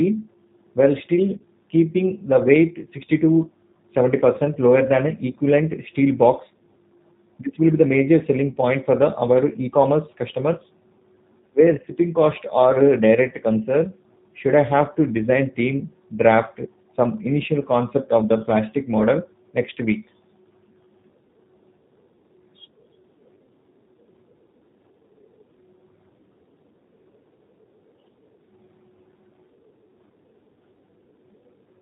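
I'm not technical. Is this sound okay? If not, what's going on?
No, not quite. The whole recording went through the G.729 codec, a phone-call format that drops the higher sounds, so the speech sounds narrow, slightly rough and a bit synthetic throughout.

There are also two brief glitches from VoIP packet loss concealed by the speech codec, where a small chunk of audio went missing and the phone software patched it with a short buzzy or noisy smear. The first is at about 1.38 to 1.42 s, between "while still" and "keeping the weight", and the second is at about 8.52 to 8.56 s, right after "be the major selling".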